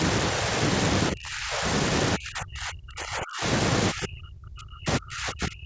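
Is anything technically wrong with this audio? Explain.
Yes. The speech sinks and breaks up three times: from 1.12 to 1.66 s (down by roughly 25 dB), from 2.17 to 3.45 s (roughly 35 dB), and from 3.92 s to the end (as much as 40 dB). The likely cause is speech suppressed in double talk. With both sides talking at once, the echo canceller could not tell this talker from the loudspeaker echo and turned down everything, leaving the voice fragmented.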